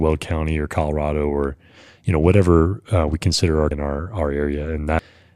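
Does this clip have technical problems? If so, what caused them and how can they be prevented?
Yes. Compressed frames skipped at 3.71 s and 4.99 s make the speech jump ahead by about half a second, then about 0.3 s, whole 85.3 ms frames lost. Unlike a dropout, no silence appears. Verify file integrity and resend damaged frames.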